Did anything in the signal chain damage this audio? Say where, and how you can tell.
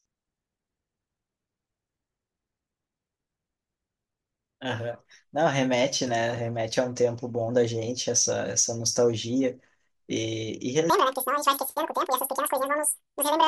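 Yes. Sample-format conversion, 10.9–13.48 s: audio read two samples at a time (double speed). Speech runs twice as fast, an octave up.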